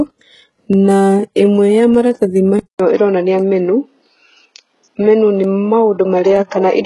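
Throughout the clip, the treble has the gritty, metallic character of HE-AAC compression. It is likely from a low-rate encode, with heavy codec damage that points to roughly 12 kbps. Only the lower spectrum is actually coded. The treble up to the 11.5 kHz ceiling is rebuilt by spectral band replication, which copies lower bands upward under a coarse envelope. The regenerated harmonics don't line up with the real ones, so s sounds come out rough and synthetic rather than clean.

At 0.73 s and again at 1.95 s there is a single sharp click, each a thin vertical line across the spectrum. These are likely dropped samples. A fraction of a millisecond is missing from the stream, so the waveform jumps straight to a later value. The gap is far too short to remove any sound. All that is heard is the discontinuity.

At 2.6 s the input likely switches to a poorer device and stays on it to the end. 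About 200 ms of silence marks the switch. When the sound returns it has a narrower band and a different tone, with the overall level unchanged. It also carries its own background noise, sitting around 55 dB below the signal.

At 2.78 s, as the sound resumes, a sharp attack is preceded by a short hiss spread over 17 ms, and the onset is smeared. This is pre-echo. The transform codec spread quantisation noise sized for the loud attack across its whole block, including the quiet moment just before it.

Two more dropped samples follow, at 3.39 s and 5.44 s. Each is again a single click of the same kind, likely from a fraction of a millisecond lost.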